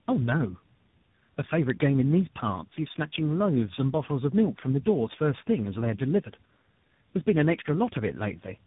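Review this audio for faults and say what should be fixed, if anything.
Tandem speech coding runs throughout: the speech sounds rough, muffled and warbly, with nothing above 3.8 kHz. That points to three codecs in a row, each re-encoding the last one's damage. To prevent it, keep one codec end to end or pass the coded stream through transparently at each link.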